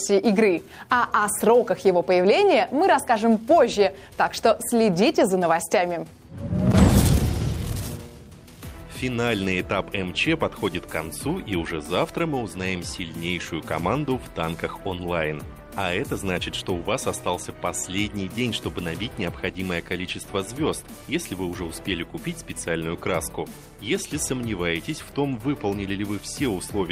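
No technical faults can be heard in this clip, so there is nothing to describe in time order.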